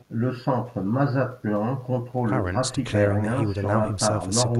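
Nothing in this recording points to a technical fault, with no dropouts, clicks, glitches or other disturbances anywhere along its run.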